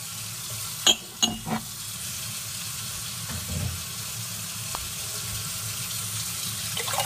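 At 4.75 s a single sharp snap cuts across the sound, a one-off transient that sits on top of the material rather than belonging to it and peaks at about -10 dBFS. It is an electrical switching spike: the likely cause is a nearby switch, motor or static discharge arcing briefly, with the audio line picking up that burst of interference as a tight click lasting only an instant.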